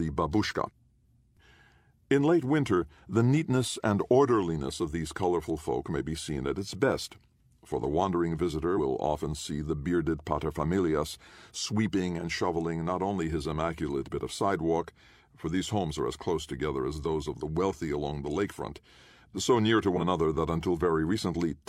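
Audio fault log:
8.73–8.79 s, compressed frames skipped: right after "best for the wandering" the speech lurches forward, losing about a tenth of a second before "often see the bearded".
19.93–20.01 s, compressed frames skipped: after "so near to" the same forward jump of about a tenth of a second occurs. Whole coded frames were missing or rejected by the decoder.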